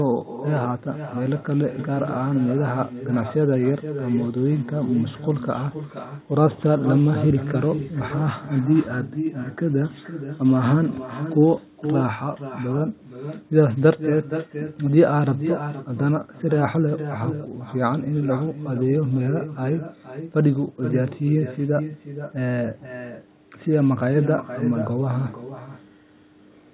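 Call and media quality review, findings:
Echo with no canceller, throughout: far-end loudspeaker audio re-enters the far-end microphone and is returned uncancelled. Every phrase is followed about half a second later by a copy about 10 dB down, thinner. Band-limited to 4 kHz, consistent with narrowband G.711.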